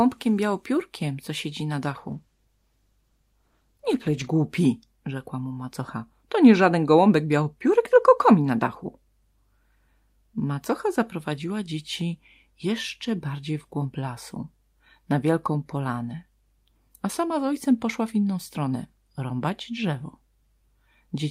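Just after "białopiórkiem co siedzi na", at 1.96 s, the speech turns rough and watery, with the top end dulled, and stays that way until about 4.35 s, holding its worst for roughly 2.3 s. This is a call bitrate drop: the connection's bandwidth estimate fell, so the Opus encoder was forced to code far more coarsely. The sound fits a fall from about 40 kbps to around 13 kbps, where high frequencies are trimmed away before the bitrate climbs back.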